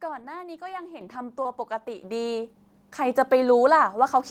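Short stretches of speech here have two issues. Short concealed packet loss hits at 0.69 to 0.72 s and 1.42 to 1.47 s: audio arrived too late, so the decoder stretched the preceding sound and left brief smears. Separately, the microphone volume stepped up by about 8 dB at 1.01 s and about 5 dB at 2.03 s, so voice and background jump louder together.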